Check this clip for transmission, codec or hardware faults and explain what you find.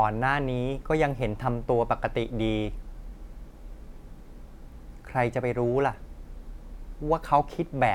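Nothing turns up in this speech clip, so there's no fault to report here.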